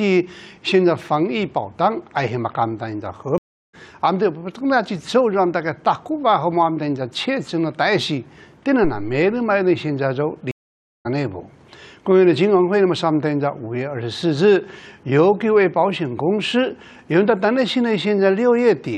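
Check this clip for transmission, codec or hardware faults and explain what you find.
Three faults are audible: two dropouts where the sound goes silent and comes back further along, and one low thump in between.

At 3.38–3.75 s the audio cuts to silence for 354 ms and resumes roughly 0.4 s further on. At 10.51–11.07 s there is a 536 ms silence, and playback returns about half a second later. Both are stream reconnects. The connection broke, the player restarted its decoder mid-stream, and it picked up at a later point, so that stretch of material is skipped.

At 8.84–9.29 s a deep thump dies away within about 100 ms. This is a phantom power thump. A supply was switched on a live input, and the voltage step passed through the coupling capacitors as a low-frequency pulse.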